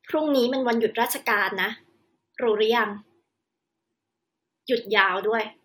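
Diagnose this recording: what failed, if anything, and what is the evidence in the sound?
Nothing failed: no stage in the chain, from the analogue wiring through conversion, buffering, processing and playback, leaves an audible mark on this speech recording.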